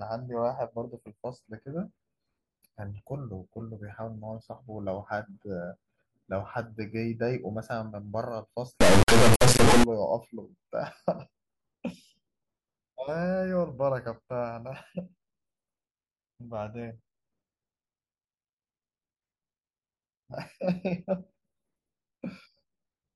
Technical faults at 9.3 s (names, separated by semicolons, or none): integer read as float